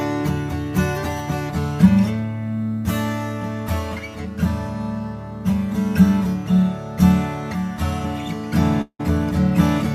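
At 8.81 s the sound breaks off and a long network dropout is likely the cause. About 180 ms of audio is missing. The receiver fills the hole by stretching out the last sound it had, heard as a buzz or hiss that fades. For about 70 ms the stretch goes quiet. At 9.01 s the audio returns. It picks up further along, so the lost part never plays.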